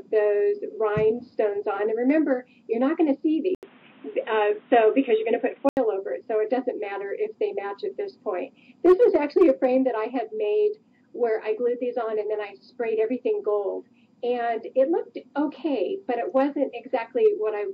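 At 3.55 s there's a gap of about 80 ms, then the sound goes dull and boxy until 5.77 s, with nothing above 3.8 kHz, a faint new noise floor underneath, and roughly the same level. That's likely the input switched to a poorer device.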